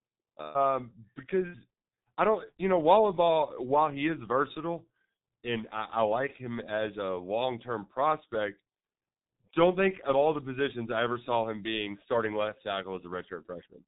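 G.723.1 codec damage runs throughout the speech. The codec models the voice in coarse 30 ms frames at a bit rate that fits about 6 kbit/s, and cuts everything above 3.8 kHz, so the speech sounds heavily muffled and hoarse, with smeared consonants.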